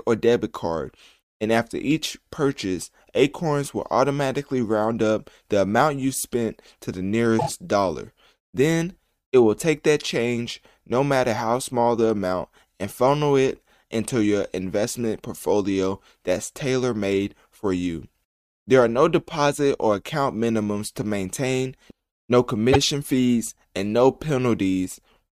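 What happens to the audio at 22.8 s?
Just before 22.8 s the speech stutters with a repeated frames fault. From 22.72 to 22.77 s, a block of about 52 ms, which fits two compressed frames, was stored or sent twice, so the decoder plays that slice once more and the clip runs 52 ms longer. On a waveform the same short stretch of cycles appears twice back to back. On a spectrogram an identical 52 ms column of harmonics is duplicated side by side.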